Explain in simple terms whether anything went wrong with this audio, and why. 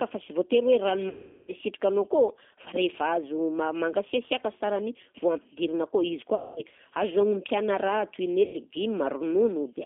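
The whole recording went through the G.729 codec, a low-rate phone codec that rebuilds speech from a compact model, so it sounds muffled, rough and slightly synthetic, with nothing above about 3.5 kHz.

There are also three gaps from VoIP packet loss concealed by the speech codec, at 1.09–1.53 s, 6.35–6.63 s (between "akao izy" and "azo agnompiàna") and 8.45–8.58 s. The decoder smeared the last sound into a fading buzz or noise to cover them.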